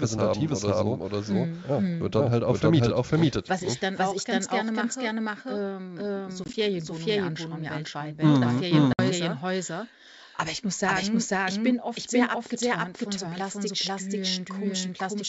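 A doubled audio track runs through the whole clip. A second full-band copy at about the same level trails about half a second behind, dry and without room colour. It is likely caused by the signal being captured twice or two out-of-step copies being mixed.

Packet loss on an ADPCM call hits from 6.44 to 6.55 s, between "gerne mache ähm so" and "mir anschauen weltweit ne". About 40 ms goes missing in short hard-edged gaps scattered over 100 ms, the longest 20 ms. Each gap knocks the decoder's predictor and step size out of step, so the sound returns slightly distorted.

The same packet loss on an ADPCM call recurs from 8.93 to 9.00 s, with 60 ms of silence. The decoder's state again drifts from the sender's, so the sound resumes slightly distorted before settling within some tens of milliseconds. Around both dropouts, the G.722 wideband coding keeps the sound clear up to 7 kHz, which fits a 64 kbit/s stream.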